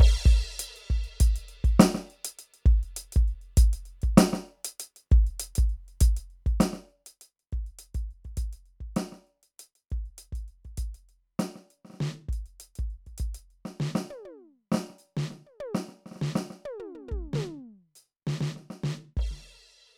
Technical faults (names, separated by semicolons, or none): none